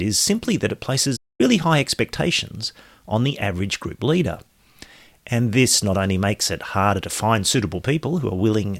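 At 1.16 s the speech cuts out abruptly in mid-flow. It stays silent for about 230 ms, until 1.41 s, then carries on. This is a playback stall. The player likely ran short of data or was blocked, so output paused until it recovered.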